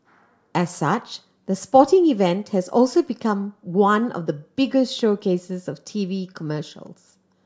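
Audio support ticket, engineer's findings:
Single sharp click at 6.87 s in the speech. Dropped samples, likely at a buffer or stream handoff losing a handful of samples, well under a millisecond. Waveform jumps straight to a later value, creating the step heard as a click. Too brief to remove audible content. Shows as a thin vertical line in the spectrogram.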